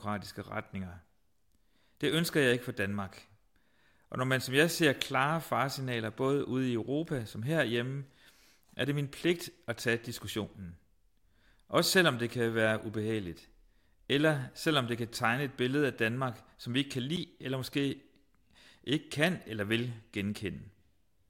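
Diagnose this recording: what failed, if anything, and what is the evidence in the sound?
At 17.16 s, between "som vi ikke kan" and "eller måske", the speech drops to silence for about 8 ms and resumes, likely a Bluetooth stall at playback: the headphone buffer ran dry awaiting resent packets. Unlike a codec dropout, there's no smeared or garbled fill.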